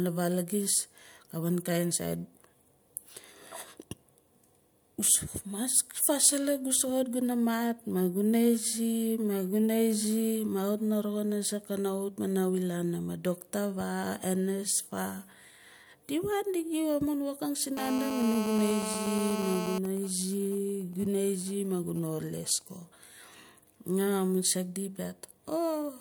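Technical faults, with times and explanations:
17.77 to 19.78 s, GSM phone buzz: after "amun woking si", a harsh 217 Hz buzz sits about 6 dB below the speech. A nearby phone in a call sends radio bursts that the audio circuit rectifies.
19.85 to 22.62 s, GSM signalling bursts: a faint pattern of even ticks with a longer 217 Hz buzz twice a second follows. The phone's user has gone silent, so only sparse burst groups reach the circuit.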